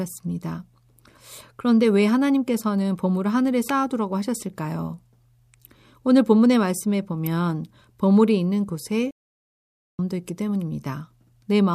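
At 3.69 s and again at 7.26 s a sharp snap cuts across the speech, each lasting only a few milliseconds. These are electrical switching spikes, likely from a nearby switch, motor or static discharge arcing and being picked up on the audio line. The snap sits on top of the voice rather than replacing it. No gap or dip in the speech comes with it, which separates it from a dropout click where the sound itself briefly vanishes.

From 9.11 s to 9.99 s the speech stops dead mid-flow and the output is completely silent for about 880 ms before sound returns. This is a playback stall, likely the player running short of data or its thread being held up until it caught up. The silence lasts almost a second and interrupts the flow abruptly, which marks it as the player halting rather than a natural pause or a brief packet-loss glitch of a few tens of milliseconds.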